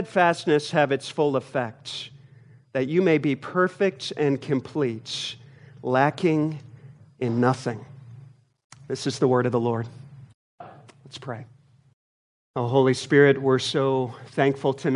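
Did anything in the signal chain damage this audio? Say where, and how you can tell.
No, nothing in the signal chain damaged this audio. No stage, from capture through to playback, leaves any audible mark on the sound.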